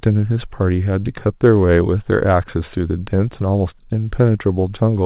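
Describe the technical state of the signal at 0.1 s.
At 0.1 s the speech is intact, with no fault present, though it carries the narrow band of a telephone-style call path, with nothing above about 4 kHz.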